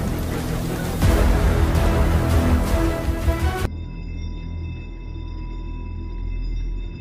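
No technical faults can be heard anywhere in this audio.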